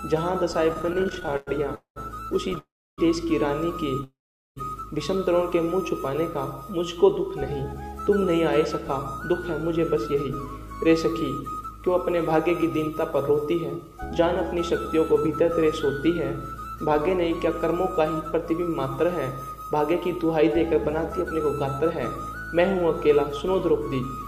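From 0.73 to 2.58 s there are repeated stalls (stutter): twenty brief holds where the receiver ran out of audio and stretched the last sound to fill the gaps. Together they add about 0.3 s, the longest 101 ms, about 16% of that stretch. Nothing is skipped, so the sound drags and hiccups. This differs from a single freeze because the interruptions are many and short, not one long hold.

Three longer interruptions are call audio freezes: 1.75 to 1.98 s (0.21 s filled, 0.11 s of it silent), 2.58 to 3.00 s (0.40 s, 0.31 s silent) and 4.04 to 4.58 s (0.53 s, 0.41 s silent). The sound is held as a fading buzz, drops to silence, then resumes exactly where it stopped. The likely cause is packets held up in transit that emptied the jitter buffer, each adding delay equal to its length. Unlike a dropout, nothing is lost, only a gap inserted.

From 7.17 s to 24.17 s a jitter buffer speed-up works off that built-up delay. 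The receiver trims tiny pitch-period slices over and over, running about 3% fast and removing roughly half a second overall. The pitch stays the same, so this is not a resampling error that raises pitch. The sound simply runs slightly fast, short of sounding hurried.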